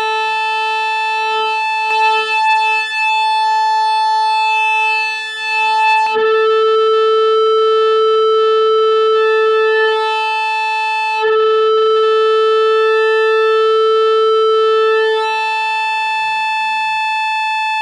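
From about 1.9 s to 6.1 s, every sound is heard twice: a second, equally loud copy trails the original by roughly 0.7 s, full-band and dry, with no decay or room colour, and it cuts in and out abruptly at both ends. This is a doubled audio track, likely caused by the same signal reaching the mix a second time through a slower path, or by an edit leaving two copies out of step.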